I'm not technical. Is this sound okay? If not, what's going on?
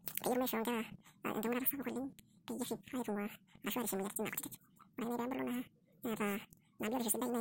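No. The speech runs twice as fast and an octave higher throughout: audio read two samples at a time (double speed), so each pair of samples plays as one.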